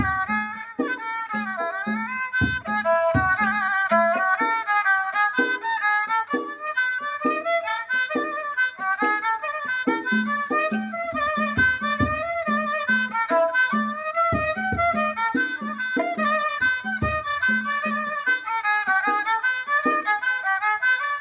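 Sound cut by the noise suppressor from 0.59 to 0.76 s: the suppressor mistook this stretch for noise and pulled it down by about 11 dB for roughly 150 ms. The audio comes through a call path with nothing above 4 kHz, which fits a G.711 mu-law codec at 64 kbps.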